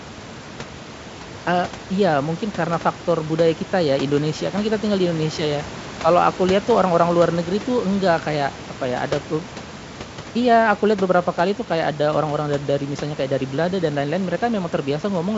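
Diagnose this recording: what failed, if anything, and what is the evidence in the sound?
Nothing failed at any stage: the speech sits about 18 dB above room noise that belongs to the recording, and the G.722 wideband path at 64 kbit/s leaves at most a faint trace.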